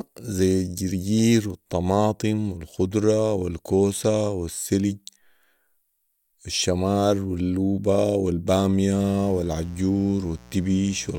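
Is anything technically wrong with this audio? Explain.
Yes. From 8.94 s to the end of the speech, a mains buzz appears. It sits well below the speech, around 25 dB down. Sharp switching spikes leak in twice per 60 Hz cycle. Their harmonics stack up into a steady, raspy buzz.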